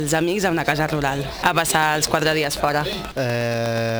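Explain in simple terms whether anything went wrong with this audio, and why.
Sample clock jitter runs through the whole recording: the converter's clock wobbles by a few millionths of a second, so the sound gains a hiss-like roughness that grows with loud, bright passages. From 1.47 to 3.90 s there is a train of clicks, about twenty evenly spaced ticks at roughly eight per second. The likely cause is interference from nearby equipment, a faulty connection or a faulty power supply.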